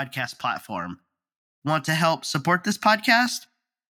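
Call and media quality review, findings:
Automatic gain rising, 1.62–3.43 s: speech and background noise floor swell together by about 6 dB over 1.8 s. AGC raising gain. Noise rising with voice rules out louder talking.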